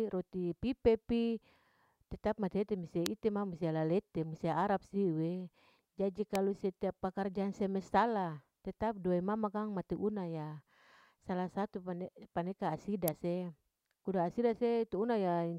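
A nearby switch or motor likely arced, and the line picked up three electrical switching spikes, at 3.06, 6.35 and 13.08 s. Each lands as a sharp snap over the speech, the first and last peaking around -10 dBFS, with the middle one somewhat quieter at around -15 dBFS.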